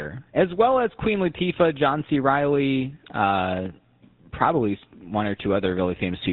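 A GSM full-rate codec coding can be heard throughout this speech. The voice has a buzzy, gravelly roughness from a vocal-tract model driven by regularly spaced pulses. Nothing above 4 kHz survives. The damage is plainly audible, and it fits a 13 kbps stream.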